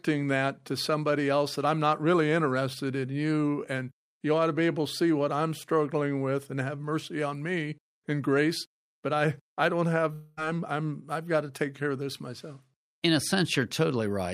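At 10.13 s the stream likely suffered a long network dropout: incoming audio stopped, and about 240 ms of the speech never reached the player. Rather than going quiet, the receiver stretched the last received sound across roughly 236 ms of the gap, heard as a buzzy, fading tone in place of the speech, with no stretch of outright silence. At 10.39 s normal audio resumes, with the missing portion simply skipped over.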